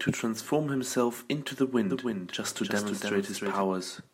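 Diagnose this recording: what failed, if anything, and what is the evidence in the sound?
A doubled audio track runs from 1.90 s to 3.62 s. A second full-band copy of the speech trails the original by roughly 0.3 s, a few dB quieter, with no decay or room colour, and it cuts in and out abruptly at both ends. The fault likely sits at the driver or routing stage, where the same signal was captured again through a slower path and summed back in out of step.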